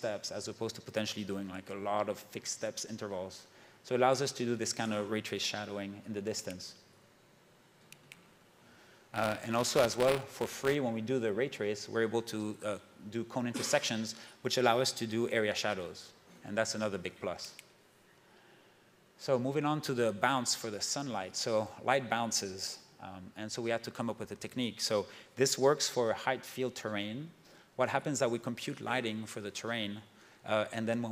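From 8.12 to 10.75 s a steady robotic buzz at 172 Hz rides on the sound. This is buffer tearing. Writer and reader of the ring buffer have slipped, so a small slice of each period replays audio about 20 ms old between hard joins. The buzz rate fits a 256-sample buffer.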